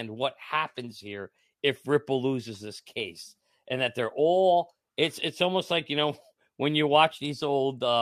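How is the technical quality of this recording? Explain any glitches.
No audible glitches or technical faults anywhere in the recording.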